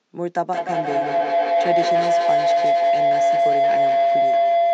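From 0.47 s to the end, a tone near 700 Hz swells, pulsing about five times a second and peaking about 8 dB above the speech: feedback howl from a self-reinforcing microphone-loudspeaker loop.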